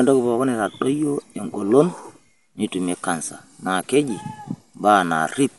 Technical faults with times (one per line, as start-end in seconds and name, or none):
0.00-5.58 Dolby Digital compression